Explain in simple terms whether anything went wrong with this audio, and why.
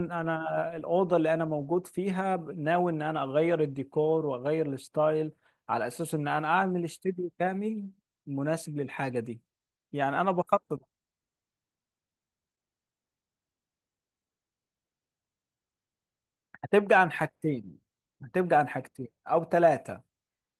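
Nothing went wrong; no faults can be heard anywhere here.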